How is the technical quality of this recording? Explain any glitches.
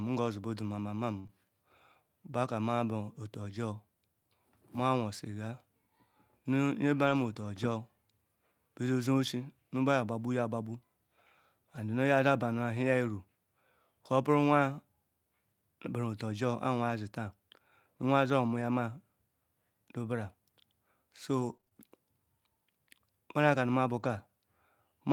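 The speech has several network-loss faults, clustered around 1.2 s and 7 s and scattered through 18.6–24.1 s.

From 1.19 to 1.36 s there is a burst of packet loss. The last sound stretches and fades for roughly 50 ms, then the speech jumps ahead, skipping about 60 ms. The receiver kept extending the final sound it had while a run of packets never arrived.

Short concealed packet loss appears twice: at 1.27–1.30 s, inside that burst, and again at 7.33–7.36 s. Each is a brief smear or wobble lasting 10–20 ms. The decoder bridged a missing 20 ms by continuing the previous sound and blending back into the real signal.

Lost packets rebuilt from error correction cover 6.97–7.31 s and 7.36–7.43 s. There is no gap, but the speech turns rougher and noisier for about 180 ms, then about 40 ms. Each missing packet was replaced by the low-bitrate Opus in-band FEC copy carried in the packet after it.

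Between 18.61 and 24.10 s there are scattered short gaps: about four brief hiccups or ticks, none longer than roughly 20 ms, concealing only around 1% of that stretch. Isolated late or lost packets were each patched by continuing the preceding sound.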